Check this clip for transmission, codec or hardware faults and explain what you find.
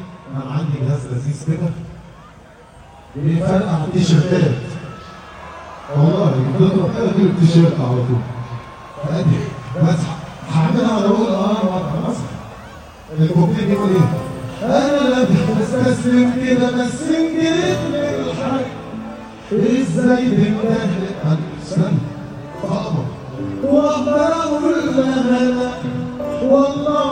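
Nothing in the clip points to a fault anywhere in the chain that carried it. There is nothing to report or explain.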